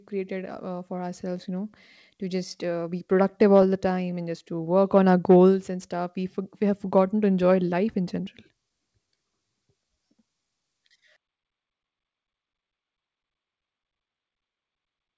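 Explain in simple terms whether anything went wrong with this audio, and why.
There's clock drift between sender and receiver here: the sending end's clock ran about 3% slow, so the receiver's buffer kept running short throughout the speech.

Repeated timing corrections patch that gap from 0.14 s to 14.93 s. Little pieces get repeated, stretching things by roughly 0.4 s, so the pace feels faintly uneven, with small hiccups.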